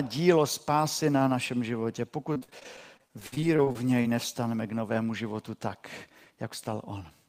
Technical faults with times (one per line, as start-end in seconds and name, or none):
2.33-4.06 repeated packet loss (robotic sound)